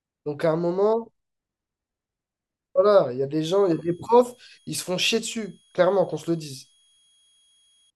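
From 3.47 s to 7.90 s a switching supply whistle sits under the speech: a thin high tone near 3.3 kHz, wandering only slightly within about 3.30 to 3.31 kHz, roughly 40 dB below the signal, from a power supply switching in its audible range.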